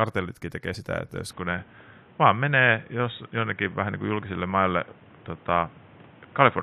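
Compressed frames skipped at 0.73 to 0.75 s in this speech clip, just before "että jos": about 20 ms of audio vanishes. Input switched to a poorer device, likely, at 1.31 s, just after "että jos", through to the end: with no gap, everything above 3.8 kHz disappears, the level shifts by roughly 5 dB, and new background noise sits about 30 dB below the sound.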